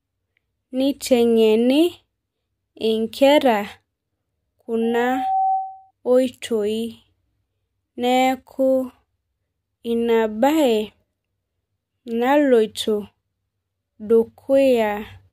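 A microphone-loudspeaker loop exceeds unity gain at 769 Hz, causing loudspeaker feedback squeal from 4.82 to 5.91 s: a tone swelling over about half a second to roughly speech level.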